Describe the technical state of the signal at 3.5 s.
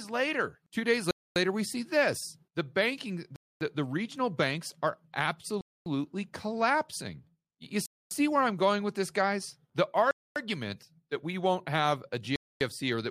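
The audio was delivered in 2-second chunks, and at this join a 250 ms gap between chunks was left empty. From 3.36 to 3.61 s, after "see this the banking" and before "the regional banks are", the speech drops into a hard-edged silent hole, interrupted but not lost.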